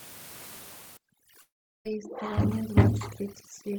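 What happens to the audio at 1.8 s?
At 1.8 s the audio is near the end of a gap from 1.41 to 1.87 s. For about 0.44 s nothing new is heard. A brief buzz or hiss carries the last sound and fades, then near silence lasts roughly 0.38 s. This is likely a long network dropout, where the receiver filled the missing stretch and resumed without it.

Overdone noise removal also runs from 0.97 s to the end. The room noise, about 17 dB below speech, is cut too hard. Faint bands vanish, leaving twinkling specks.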